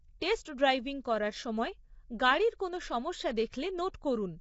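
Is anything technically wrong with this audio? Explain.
Yes. Throughout the speech the sound is rough and grainy, and nothing survives above about 7.7 kHz. The likely cause is low-delay AAC compression (AAC-ELD) at a bitrate that fits about 24 kbps. Its short frames resolve pitch harmonics poorly, so noise fills the gaps between them and the voice turns coarse. Ordinary AAC or MP3 at a similar rate tends toward watery, swirling artefacts instead. Here the texture is a steady graininess with a hard top-band ceiling.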